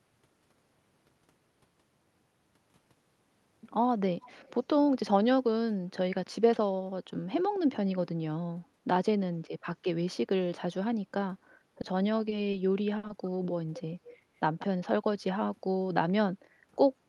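The clip is speech with an echo leak in two pairs: 4.25–4.32 s and 4.48–4.54 s, where a faint copy trails the speech by 245 ms, and 14.04–14.16 s and 14.59–14.67 s, where a somewhat louder copy trails by 184 ms. Its likely cause is a loudspeaker echo canceller letting part of the sound back through. Unlike room reverberation, the echo is a distinct, late repeat rather than a smooth tail. Short concealed packet loss appears at 11.81, 12.29, 12.51 and 13.07 s. Each is a brief 20 ms smear or wobble where the receiver stretched the preceding sound over a missing packet and then blended back. This makes them shorter and subtler than a burst. The burst of packet loss at 12.97–13.05 s is longer, with 60 ms missing. There the held sound turns into a buzz or hiss that fades before the audio resumes further along, so a stretch of speech is skipped instead of merely smeared.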